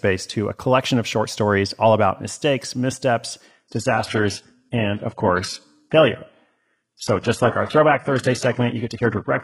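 Adaptive stream at a lower bitrate from 3.46 s to the end, right after "all about mistakes missteps": the connection slowed and playback switched abruptly, with no gap, to a lower-bitrate version. Codec artefacts rise, nothing remains above 11.5 kHz, and the sound fits a drop from roughly 96 kbit/s AAC to a 12 kbit/s HE-AAC stream.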